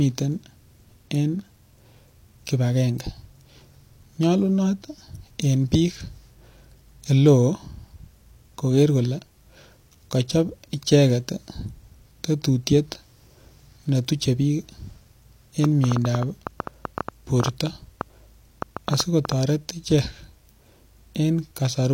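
From 15.64 to 19.33 s a train of clicks ticks over the speech, about thirty irregular pulses at 6.8 per second, likely interference. They show as thin vertical spikes, some 15 dB above the speech.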